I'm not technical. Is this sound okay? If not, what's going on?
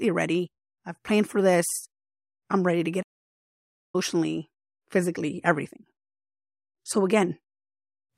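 No. At 3.02 s the speech cuts to silence for almost a second, until 3.95 s. This is a playback stall, likely the player running out of data. Unlike a brief dropout or click, the gap is long, clean and complete.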